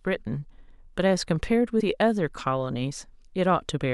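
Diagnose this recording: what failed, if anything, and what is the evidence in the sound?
Codec stage: compressed frames skipped at 1.8 s. About two 26.1 ms frames vanish, and overlap smears the join into a blip, a brief spectrogram smudge.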